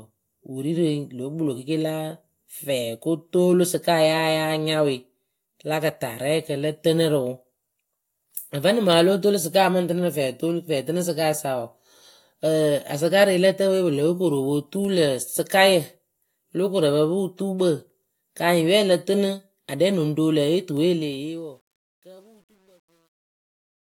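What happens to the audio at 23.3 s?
Truncation distortion on a fade runs from 20.84 s to 23.88 s, worst from 21.53 s onward, so 23.3 s sits deep in it. The fade-out is requantised without dither at a coarseness that fits a 10-bit stage, so the tail turns gritty.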